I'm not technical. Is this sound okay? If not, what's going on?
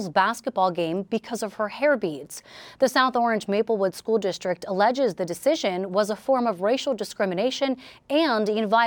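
No, not quite. Throughout the speech there is imaging from linear upsampling. The audio appears to have been converted to a higher sample rate, consistent with a 24 kHz original raised to 48 kHz, by simply joining the existing points with straight lines. That crude step dulls the very top of the sound and leaves a faint mirrored copy of it between 12 kHz and 24 kHz, heard as a light metallic shimmer on hissy sounds like s and sh.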